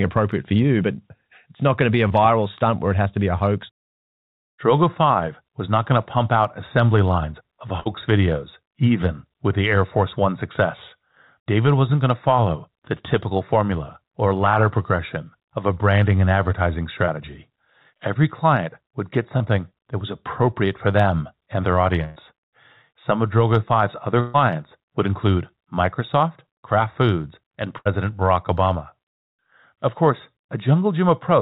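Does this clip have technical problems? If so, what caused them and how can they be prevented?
Yes. Short concealed packet loss at 2.08–2.12 s and 17.06–17.09 s: about 20 ms of audio went missing, and the receiver extended the preceding sound to cover it, leaving a brief smear. Prevent it with a network path that drops fewer packets, or with forward error correction.

Burst of packet loss at 7.80–7.88, 22.04–22.18, 24.20–24.36 and 27.78–27.87 s: 60, 120, 140 and 80 ms were lost consecutively, heard as a held, fading continuation followed by a jump ahead. Prevent it with a larger jitter buffer, redundancy and a more stable connection.

The band-limiting at 4 kHz, with nothing above it, fits the G.711 mu-law call codec.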